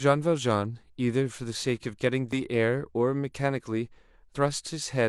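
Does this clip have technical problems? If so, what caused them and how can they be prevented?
Yes. Overlap between stream segments causes tiny skips at 2.33 s and 4.34 s, about 2 s apart, matching the segment length. Each join trims roughly 17 ms of real speech, so the waveform jumps forward. Unlike a dropout, no silent gap appears. Prevent it by keeping segment timestamps contiguous so joins neither overlap nor get trimmed.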